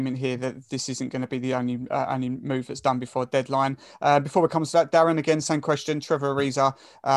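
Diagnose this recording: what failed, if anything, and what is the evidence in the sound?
Nothing failed, and the sound gives no evidence of a fault at any stage of this recording.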